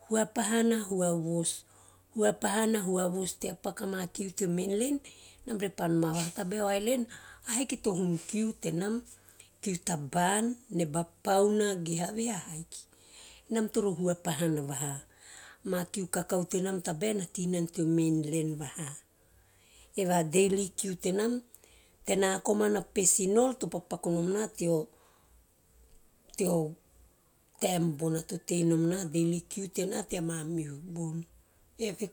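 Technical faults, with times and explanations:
Nothing stood out on listening to this speech recording.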